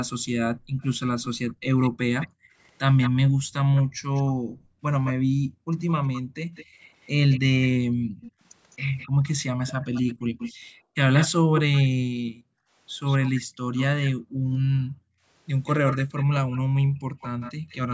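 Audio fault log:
0.17–6.8 s, 7.9–9.23 s, 10.26–10.95 s, 12.1–15.25 s, 16.65–17.69 s: background gated by the echo canceller. The room sound drops by up to about 40 dB, then returns. The canceller clamps the microphone while the loudspeaker plays. The dips total roughly two seconds in the first stretch and under two seconds in the last.
0.82–11.81 s, 13.08–14.57 s, 15.65–17.75 s: echo leak. A delayed copy of the speech trails the original. It lags 207 ms and sits about 10 dB down at first, then lags 172 ms at about 15 dB down. This is likely leftover loudspeaker pickup that the far end's echo canceller failed to remove.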